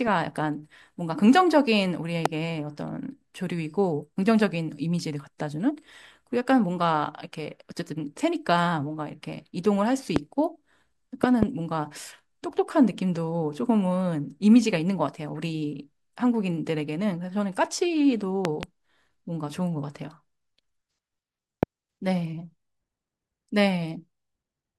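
Speech carrying loud pops at 2.26–2.28 s, 10.16–10.19 s and 21.63–21.65 s, with double pops at 11.24–11.45 s and 18.45–18.65 s, each spiking some 20 dB above the talker. These are likely electrical transients, such as a switch or connector glitch. Unlike mouth plosives, they sit on top of the speech, which continues uninterrupted underneath.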